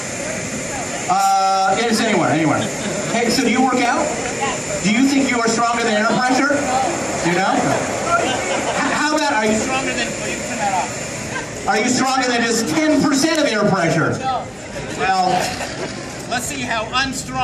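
Regular clicks recur every 3.09 s from 0.76 to 16.26 s, likely clock drift buffer slips: mismatched device clocks periodically drop or repeat about 15 samples.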